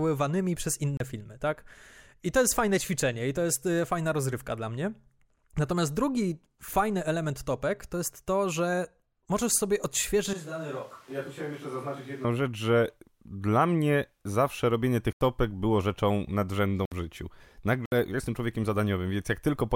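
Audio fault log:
0.97 to 17.92 s, block of digital silence: four dropouts, at 0.97 s (31 ms), 15.13 s (85 ms), 16.85 s (64 ms) and 17.86 s (64 ms). The signal is abruptly replaced by zeros and then resumes, as when output buffers go unfilled; the longest gap fits a 4096-sample buffer.
10.33 to 12.24 s, switch to a distant microphone: the speech suddenly turns hollow and roomy, thinner in the bass, roughly 10 dB quieter, with room noise only about 25 dB below it. It then snaps back, likely because the close microphone dropped out.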